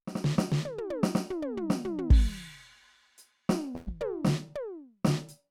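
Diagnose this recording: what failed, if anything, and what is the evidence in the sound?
The network dropped a burst of packets, roughly 3.75 to 3.89 s into the music. The receiver's concealment held onto the last bit of sound and faded it for about 110 ms, then the music picks up again with around 120 ms simply gone.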